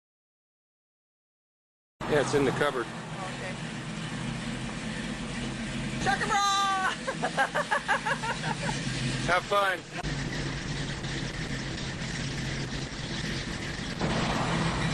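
At 9.4 s a call bitrate drop sets in and lasts until about 14.39 s. The connection's bandwidth estimate fell and the encoder was forced to spend far fewer bits, quantising the signal much more coarsely and discarding the upper frequency band. The sound turns muffled, rough and watery, consistent with a fall from around 96 kbps to roughly 12 kbps. Quality stays at that floor for nearly 5 s before the rate climbs back.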